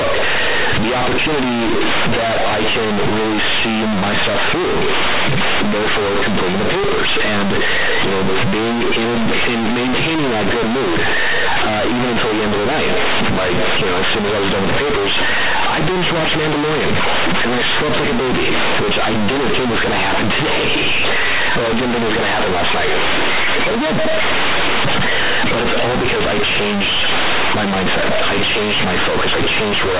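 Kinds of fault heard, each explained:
Companded audio read as linear: the speech is very loud and harshly buzzy throughout, with heavy noise filling the pauses and quiet passages pushed up nearly to the level of loud ones. The bytes are mu-law coded, as in G.711 telephone audio (nothing passes above 4 kHz, which fits that sampling rate), but they are played as plain linear 8-bit samples without expansion, so every sign change swings the waveform across about half its range.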